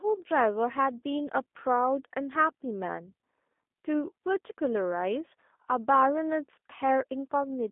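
From start to finish the speech carries the sound of a G.729 codec, the low-rate telephony coder, here at 8 kbit/s. The coder rebuilds each short frame from a vocal tract filter, a pitch predictor and a few pulses. The result is audibly rough and synthetic. The line band runs from 250 Hz to 3.6 kHz. Nothing above about 3.8 kHz survives, so sibilants lose their hiss. The voice sounds thin and boxed in.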